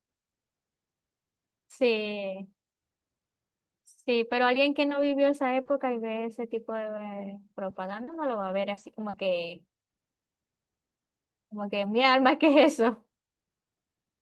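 Speech with four short stretches that turn rough and noisy without ever dropping out: 2.01 to 2.07 s, 4.99 to 5.09 s, a longer 8.03 to 8.49 s patch, and a brief blip at 11.83 s. This is a lost packet rebuilt from error correction. Each missing piece of audio was replaced by the low-bitrate backup copy carried in the following packet, so the gaps are filled with coarser sound. The lengths fit runs of 20 ms packets.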